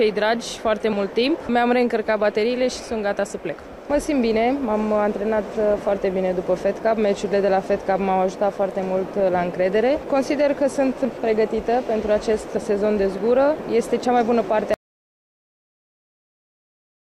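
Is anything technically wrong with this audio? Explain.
Yes. At 14.74 s the sound cuts off abruptly and never returns, leaving complete silence through the end of the clip, roughly the last 2.4 s. This is an audio dropout to silence, with no room tone or noise floor remaining. The likely cause is that the input was lost, through a disconnected device, a broken link or an accidental mute, while recording carried on writing silence. On a waveform the trace collapses to a flat line, and a spectrogram goes blank there.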